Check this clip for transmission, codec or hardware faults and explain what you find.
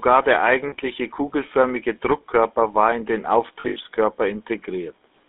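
Two faults are present, one running through the whole speech clip and one at two moments.

GSM full-rate codec, throughout: the speech sounds buzzy and gravelly, confined to roughly 250 Hz to 3.7 kHz. This comes from the vocal-tract model being driven by sparse pulse excitation, which fits a 13 kbps GSM full-rate stream.

Lost GSM frames, at 0.68 to 0.75 s and 3.6 to 3.79 s: the sound briefly freezes into a rough, metallic ring. The first gap lasts about 40 ms; the second, right after "war in den", is scattered across 160 ms with the longest run near 70 ms. Each time, the decoder repeats the last good frame.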